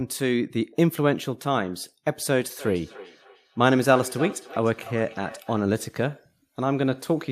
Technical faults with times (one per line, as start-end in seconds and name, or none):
2.46-5.66 feedback echo between two devices